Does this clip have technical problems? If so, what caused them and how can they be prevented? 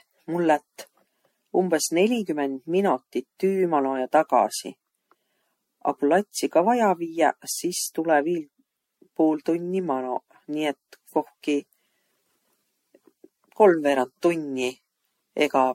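Yes. Generation loss runs throughout: swirly, hollow, smeared speech with blurred attacks and nothing above 16.5 kHz, likely from roughly seven MP3 re-encodes, consistent with 64 kbit/s. Prevent it by editing from a lossless source and encoding only once.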